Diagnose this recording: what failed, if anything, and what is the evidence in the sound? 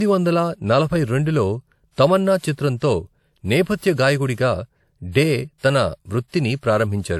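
Codec stage: nothing above 17.3 kHz throughout, likely low-bitrate audio saved at a high bitrate; re-encoding cannot restore what the first codec removed.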